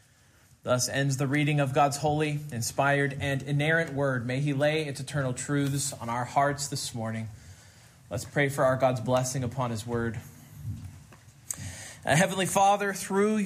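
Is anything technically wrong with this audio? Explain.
No, nothing technically wrong can be heard here.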